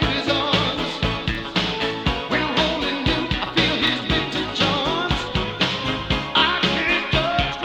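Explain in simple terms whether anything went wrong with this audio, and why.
A brief click or stutter occurs at 1.35, 3.87 and 6.40 seconds, every 2.5 seconds. These are overlapping chunks: the audio was handled in 2.5-second pieces, each starting about 25 milliseconds before the previous one ended, so that sliver plays twice at every join.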